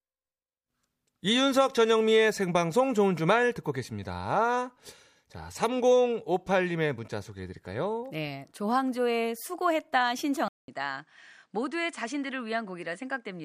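An input switch to a poorer device occurs at 10.48 s. After a 200 ms silence, the speech loses everything above 10 kHz, drops a few decibels in level and carries a faint new noise floor to the end, likely because recording moved to a lower-quality microphone.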